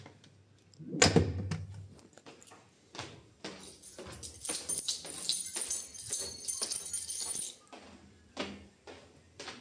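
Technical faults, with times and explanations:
Nothing here needs flagging, as the sound comes through with no technical faults to point to.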